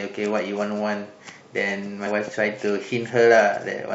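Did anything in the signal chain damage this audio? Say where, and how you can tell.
Yes. At 2.06 s the speech jumps forward. That is the codec stage: compressed frames skipped, about two 23.2 ms frames, so roughly 50 ms of audio never plays.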